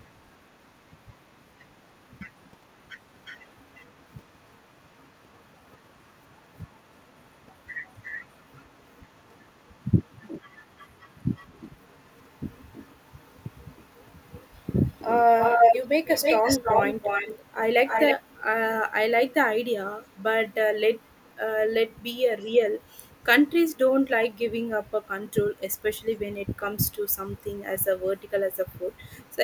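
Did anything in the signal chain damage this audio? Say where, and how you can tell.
Yes, an echo leak at the call processing stage, likely a loudspeaker end whose echo canceller let its mic pickup back through. A copy delayed by 354 ms runs from 3.24 to 17.45 s, about 10 dB down. From there the delay is 321 ms: nearly as loud as the speech at 17.86–18.15 s, then very faint scraps at 20.04–20.09, 22.4–23.07, 23.74–23.78, 26.13–26.47, 27.13–27.62 and 28.19–29.32 s.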